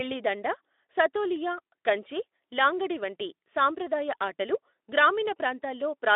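There are no technical faults to describe at any point in this speech.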